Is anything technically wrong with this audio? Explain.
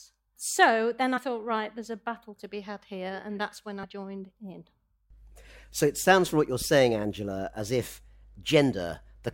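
Yes. At 3.83 s, just after "here and that's when", compressed frames are skipped. About 70 ms of speech never plays. The decoder lost or rejected those frames and jumped ahead. At the join the speech jumps abruptly forward.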